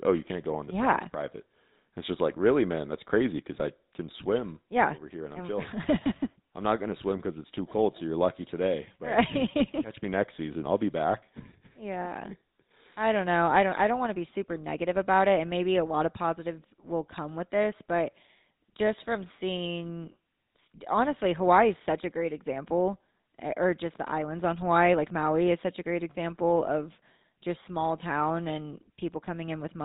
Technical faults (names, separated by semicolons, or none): GSM full-rate codec